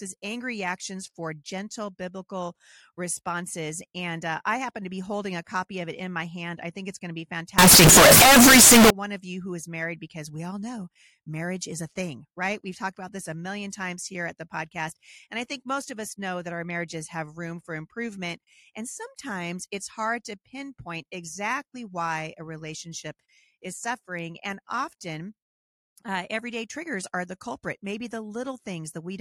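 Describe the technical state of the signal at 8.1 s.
At 8.1 s you're right in the middle of a stretch of very loud, harsh distortion running from about 7.59 to 8.90 s. The quiet parts come out just as loud as everything else. That's likely signed and unsigned mixed up: the samples seem to be read with the wrong sign convention, which fits 16-bit audio, so the top bit flips and every zero crossing turns into a jump across the whole range.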